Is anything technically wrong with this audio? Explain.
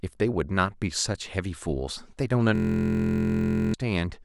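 Yes. From 2.55 to 3.74 s, a system hang loop: the driver stalled while the hardware replayed one 23.2 ms chunk, fitting a 1024-sample buffer. It comes out as a steady 43 Hz buzz, swallowing about a second of speech.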